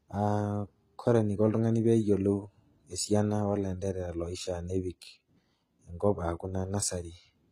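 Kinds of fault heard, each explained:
HE-AAC compression: The top end sounds rebuilt rather than recorded, likely HE-AAC at a rate that fits something near 20 kbps. Treble gets copied up from the coded lower band, so s sounds come out gritty and lispy throughout the clip.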